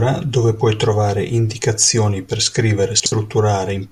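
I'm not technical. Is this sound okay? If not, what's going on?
No. At about 3.0 seconds the speech briefly stumbles, with a short jumbled blip lasting to about 3.12 s. This is chunks out of order: one 60-millisecond piece of audio arrived late and played after the piece that should have followed it, leaving hard joins.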